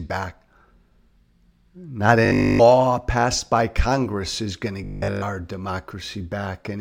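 From 2.26 to 2.60 s, just before "passed by", and again from 4.84 to 5.22 s, right after "is going to", the speech collapses into a rigid, metallic buzz locked at 50 Hz that only loosely tracks the talker. This is robotic sound from repeated short buffers: the likely cause is audio arriving too seldom, so a 20 ms slice is looped over nearly the whole span while the real signal is skipped.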